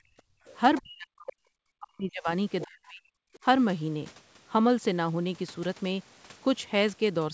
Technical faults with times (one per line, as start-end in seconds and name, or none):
0.03-0.09 speech suppressed in double talk
0.37-0.45 background gated by the echo canceller
0.45-0.81 other side's voice leaking through
0.81-1.41 speech suppressed in double talk
1.79-2.29 speech suppressed in double talk
2.64-3.04 speech suppressed in double talk
3.33-3.39 other side's voice leaking through